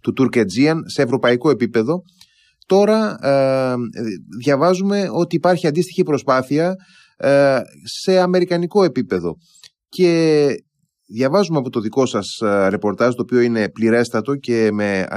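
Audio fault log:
1.28 s and 5.33 s, corrupt frame decoded: a short, fairly loud glitch at 1.28 s, then a fainter one at 5.33 s. Damaged compressed frames, about one and then a few, were decoded anyway. Misread gains and codes put energy at the wrong frequencies.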